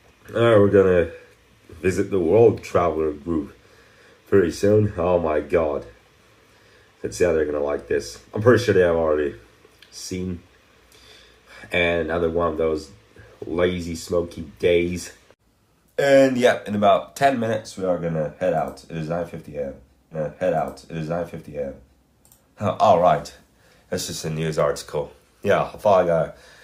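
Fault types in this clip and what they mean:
Stream segment repeated: at 20.11 s the audio jumps back and plays a two-second stretch again, running to 22.11 s, with a small blip at the point where it rewinds, so the passage is heard twice in a row and the clip runs two seconds longer. This happens when the player fetches or queues the same stream segment a second time and hands it to playback as if it were new material.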